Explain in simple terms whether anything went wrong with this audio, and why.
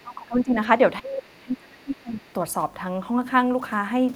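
The speech drops away twice, from 0.03 to 0.56 s clearly and from 1.0 to 2.23 s much more, nearly vanishing. This is speech suppressed in double talk, likely because the echo canceller heard both sides talking and turned the talker down. The talker's own voice shrinks, with nothing added.

From 2.19 to 2.33 s, a very faint second voice slips in. This is the other side's voice leaking through, likely loudspeaker sound the echo canceller missed. Unlike the suppression, this adds an unwanted voice rather than taking the talker's away.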